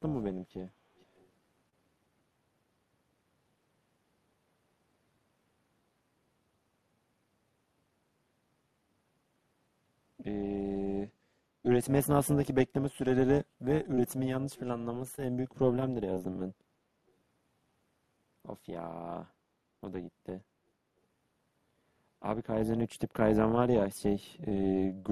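A speech recording with three faults. An overlap-add ripple runs throughout. The level swells and dips by about 6 dB at a rate near 400 Hz. That gives a metallic buzz with extra tones around each note. The frames were rejoined with windows whose overlap does not add to a steady gain. A faint delayed copy of the speech appears from 1.0 to 1.25 s, and again from 14.56 to 14.71 s. It trails the talker by 477 ms. It sits far below the speech at first, and is somewhat louder the second time. This is likely echo leak, where a far-end loudspeaker's sound escaped its echo canceller. Short concealed packet loss occurs five times: 1.69 to 1.75 s, 13.95 to 13.99 s, 15.15 to 15.20 s, 16.14 to 16.20 s, and 24.49 to 24.53 s. Each time, 20 ms of audio never arrived. The receiver extended the preceding sound to bridge it, leaving a brief smear or wobble. At 1.69 s and 16.14 s the timeline also closes up, by 7 and 11 ms.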